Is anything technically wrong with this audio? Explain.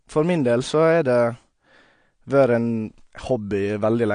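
Yes. Throughout the speech, the likely cause is AAC compression at a low bitrate, consistent with about 32 kbps. The encoder discards detail it judges inaudible and cuts everything above 9.8 kHz, leaving dull, smeared speech with plainly audible warbling, fizzy sibilants.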